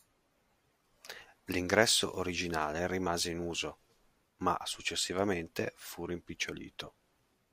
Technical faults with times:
none

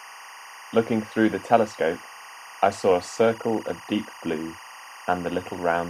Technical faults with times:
0.00-5.89 timecode bleed

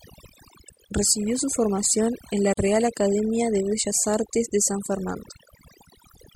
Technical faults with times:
0.00-6.36 overdone noise removal
2.54-2.57 gap at a join of encoded pieces

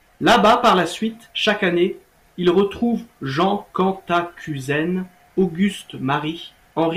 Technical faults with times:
0.27-0.81 hard clipping
1.48-1.67 hard clipping
2.47-2.61 hard clipping
3.40-3.43 hard clipping
3.80-4.18 hard clipping
5.41-5.43 hard clipping

